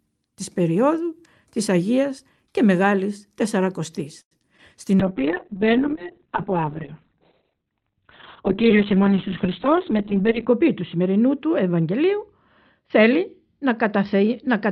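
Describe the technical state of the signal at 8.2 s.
At 8.2 s a call bitrate drop is active (from 5.01 s to the end). The encoder falls from 48 to 6 kbps, so speech turns muffled and watery, and the spectrogram shows content cut off above 4 kHz.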